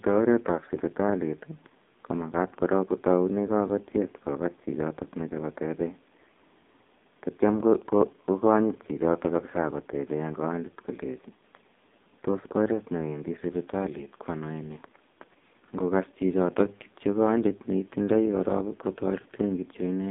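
From start to finish the speech carries the AMR narrowband mobile codec sound. The line band runs from about 200 Hz to 3.7 kHz, and nothing passes above 3.8 kHz, so on a spectrogram everything above that is an empty ceiling. The codec damage is heavy: the voice sounds buzzy and synthetic because so few pulses drive the vocal-tract model in each 5 ms. This fits AMR-NB at its 5.15 kbps mode.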